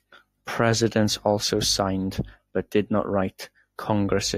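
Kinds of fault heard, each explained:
No technical faults can be heard in the speech.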